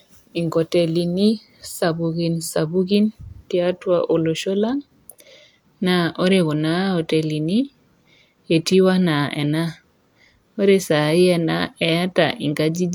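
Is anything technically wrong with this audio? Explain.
No, no technical faults are audible.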